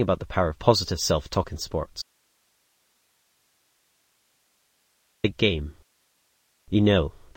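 The sound cuts out abruptly at 2.02 s and returns at 5.24 s, an audio dropout to a faint residue lasting 3.2 s. Only hiss, around 45 dB below the signal, fills the gap. The likely cause is a lost source with the downstream path still live.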